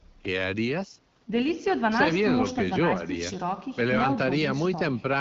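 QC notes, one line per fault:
No faults are present in the speech, which has passed through the AMR wideband (HD Voice) codec at 12.65 kbit/s, a rate where the coded band up to 6.4 kHz stays clear, the region from 6.4 to 7 kHz is filled with shaped noise, and the coding leaves only light traces on the sound.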